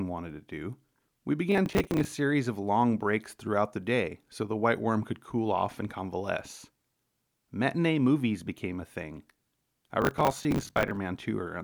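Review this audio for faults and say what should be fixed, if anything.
Processor overload crackle at 1.52–2.12 s and 10.02–10.98 s: short buffers around 10 ms miss their deadlines and replay stale audio. Fix it by easing processing load or using bigger buffers.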